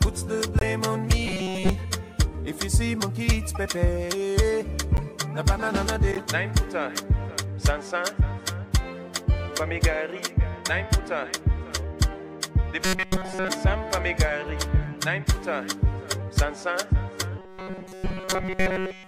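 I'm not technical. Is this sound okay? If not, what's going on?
No, there are two kinds of fault. The corrupt frame decoded fault appears at 0.59–0.63, 4.97–5.03 and 6.12–6.20 seconds. A damaged chunk of the compressed file was played anyway, producing a brief chirp, squeak, blip or burst of noise. Each lasts only a fraction of a second and never settles into a steady tone.

Robotic sound from repeated short buffers appears at 1.26–1.69, 12.85–13.49 and from 17.39 seconds to the end. The sound turns into a rigid, metallic buzz at a fixed 188 Hz, likely because a tiny slice about 5 ms long kept being replayed while fresh audio was skipped. It lasts longer than the blips, and the last stretch is buzz throughout.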